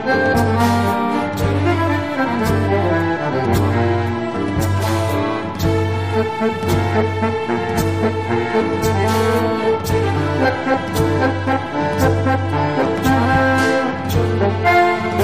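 Nothing stood out as a technical fault on listening to this recording.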